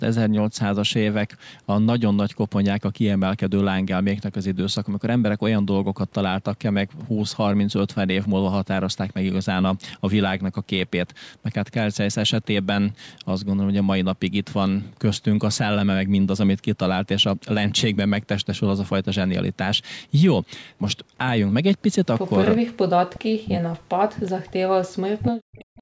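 Echo leak at 22.21 to 22.3 s: a faint, delayed copy of the speech surfaces about 375 ms after the original, roughly 30 dB below it. The likely cause is a loudspeaker on the far side whose echo canceller let part of its microphone pickup return down the line.

Speech suppressed in double talk, from 22.55 to 24.78 s and again from 25.0 to 25.8 s: the speech sinks sharply, by as much as around 40 dB, and breaks up for roughly two seconds and then most of a second. This is likely an echo canceller that could not distinguish the local talker from the returning echo while both sides spoke together, so it turned everything down.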